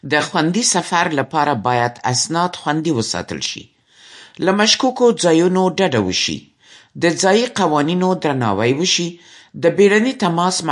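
From start to finish the speech carries plainly audible MP3 compression, likely from a low bitrate around 48 kbps: nothing survives above about 11.3 kHz, s sounds turn swirly and watery, and attacks smear. A spectrogram shows a flat ceiling at that cutoff and speckled, flickering high-frequency patches.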